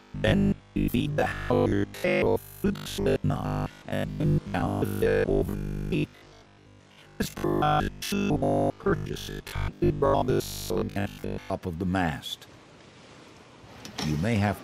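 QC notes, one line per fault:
0.02–11.5 s, robotic sound from repeated short buffers: the audio becomes a rigid, metallic buzz locked at a steady 50 Hz, loosely following the underlying sound. This is likely a playback path starved of new data and filling the gaps by looping its last fragment. The 50 Hz buzz fits a repeated slice about 20 ms long, and most of the real audio in this stretch sounds skipped rather than played.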